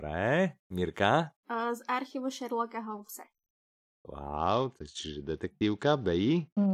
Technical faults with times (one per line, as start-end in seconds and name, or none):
4.37-6.74 Bluetooth SBC bit pool drop